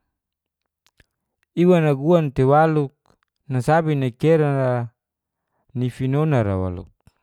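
No technical faults can be heard anywhere here.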